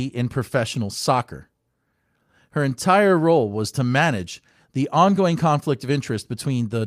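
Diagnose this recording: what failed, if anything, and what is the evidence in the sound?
Nothing seems to have gone wrong anywhere along the chain here, and the speech comes through without any audible sign of trouble at any stage.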